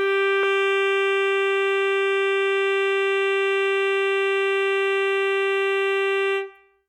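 Compressed frames skipped at 0.43 s: the music jumps forward by roughly 70 ms, which fits about two lost frames of 32 ms each, missing or rejected by the decoder.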